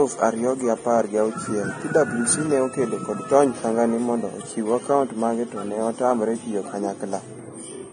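Speech throughout, with nothing above 9.7 kHz and a grainy, hissy top end that roughens the voice and smears consonant attacks. It's likely heavy Vorbis compression, treble quantised down to noise, and the damage fits a bitrate around 23 kbps.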